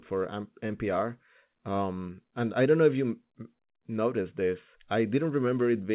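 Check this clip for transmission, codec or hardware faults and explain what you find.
No transmission, codec or hardware faults are present in the speech, which has passed through a call path whose band stops at 4 kHz, consistent with G.711 A-law telephone coding at 64 kbps.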